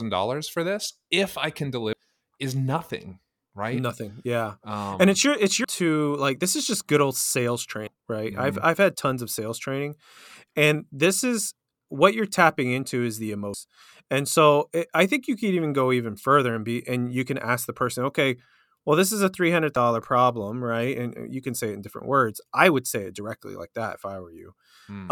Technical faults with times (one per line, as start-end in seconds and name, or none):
1.93 damaged data in a compressed stream
5.64 damaged data in a compressed stream
7.87 damaged data in a compressed stream
13.54 damaged data in a compressed stream
19.76 damaged data in a compressed stream